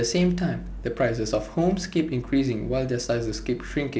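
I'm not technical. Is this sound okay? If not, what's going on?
Yes, this speech sounds fine, with nothing out of the ordinary standing out on listening beyond the slightly hissy top end you'd expect from a wideband phone call.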